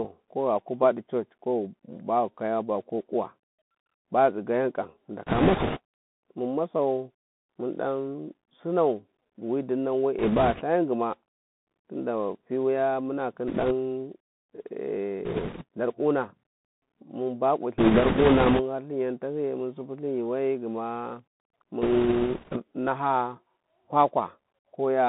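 Throughout, the speech passes through a Bluetooth CVSD headset codec. It encodes one up-or-down bit per sample, which fits a 64 kbps link, and its adaptive step cannot keep up with loud high-frequency detail. The band is held to roughly 150 Hz to 3.6 kHz, s sounds turn scratchy, and a granular hiss sits underneath.

Bit errors on the Bluetooth voice link flip bits at 5.27–5.79, 10.19–10.63, 13.47–13.73, 15.25–15.63, 17.78–18.62 and 21.82–22.59 s. Each flipped bit nudges the waveform only slightly and then fades, so instead of clicks there is a rushing crackle. It is heaviest at 5.27 and 17.78 s, where roughly one bit in ten is wrong, and lighter elsewhere, at a few percent.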